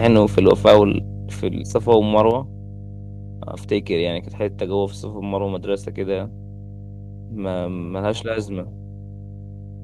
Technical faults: mains hum; microphone overload; microphone volume stepped down

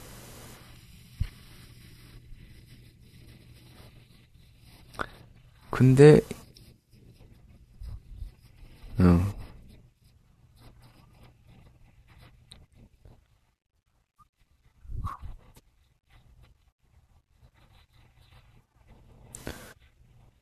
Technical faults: none

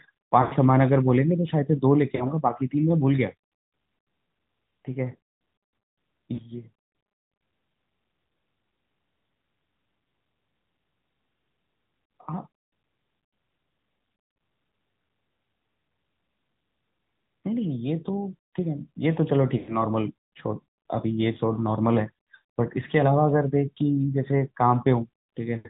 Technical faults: AMR narrowband mobile codec; lost AMR speech frames

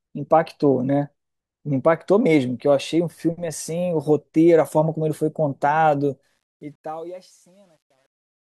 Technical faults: truncation distortion on a fade

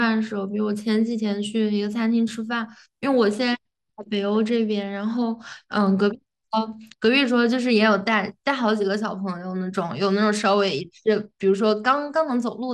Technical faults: Bluetooth SBC bit pool drop

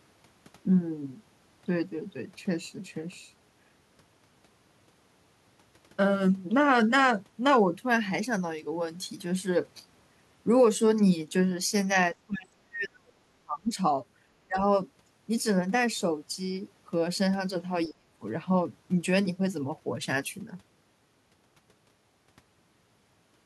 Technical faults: speech suppressed in double talk

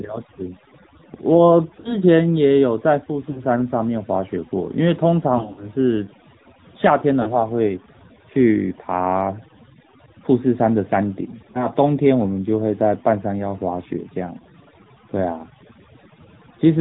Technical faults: overdone noise removal; AMR narrowband mobile codec; lost AMR speech frames

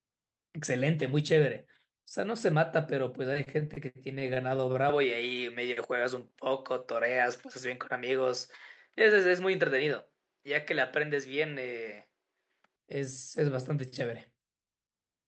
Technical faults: repeated stalls (stutter); input switched to a poorer device; jitter buffer slow-down; jitter buffer speed-up

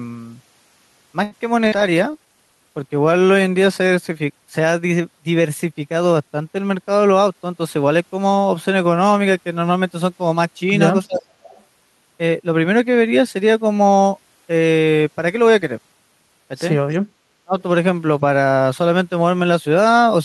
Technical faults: short stall from a late packet; call bitrate drop; burst of packet loss; jitter buffer slow-down; jitter buffer speed-up; speech suppressed in double talk; echo leak

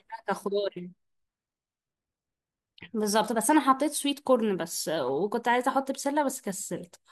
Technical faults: none

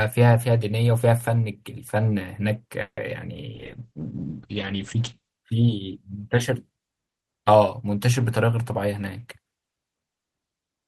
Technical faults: call audio freeze; call bitrate drop; jitter buffer speed-up

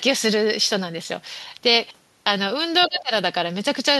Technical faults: speech suppressed in double talk

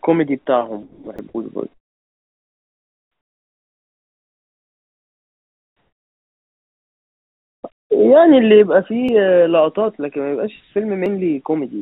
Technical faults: sound dropped by the voice detector; audio missing between chunks; comfort noise in place of the background

